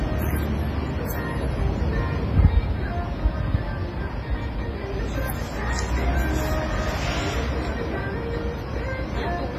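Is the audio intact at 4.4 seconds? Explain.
No. At 4.4 s, as everywhere in the clip, there's heavy WMA compression damage, likely from a low-bitrate WMA encode around 24 kbps. Long transform blocks smear quantisation noise into a ringing, washy hiss that breathes with the sound, and nothing survives above 15.2 kHz.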